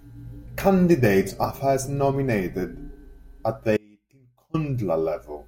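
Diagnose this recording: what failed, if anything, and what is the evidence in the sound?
The signal was likely interrupted in the analogue wiring while the path downstream stayed live. Right after "are first nominated at", the speech drops abruptly at 3.77 s to a faint residue about 30 dB down, returning at 4.54 s. This is an audio dropout of 0.77 s.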